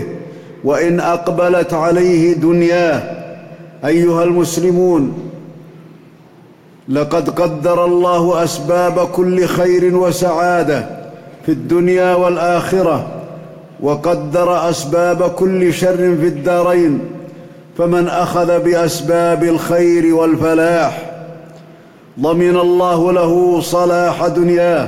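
Nothing technically wrong can be heard anywhere in this recording. The sound holds steady throughout, with no moment that calls for a closer look.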